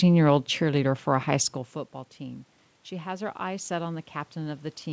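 From 2.17 s, just after "a high school football", the input drops by about 16 dB. The automatic gain control treats it as too quiet and raises its gain gradually until the end, so the speech and room noise swell together.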